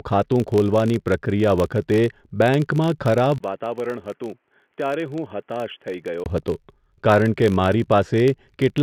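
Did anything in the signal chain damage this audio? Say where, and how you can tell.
Yes, two things. First, there's a filter restarted on every block somewhere in the processing, at the driver or buffer stage. Across the whole clip you get a steady 50 Hz buzz riding under the speech, and it swells and fades with the level. That's the filter dropping its state at each block boundary and starting cold, throwing a little transient every block. A 50 Hz rate points to blocks of about 20 ms.

Second, from 3.38 s to 6.26 s the sound goes thin and boxy. The band narrows, the speech drops roughly 10 dB, and a new noise floor sits well below it. There's a 20 ms dropout right at 3.38 s where it changes over. That band limit is classic call-profile territory, so the likely cause is the input switched to a poorer device, such as a headset in telephony mode, until 6.26 s.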